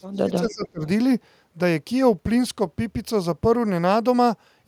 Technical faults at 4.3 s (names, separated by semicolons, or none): none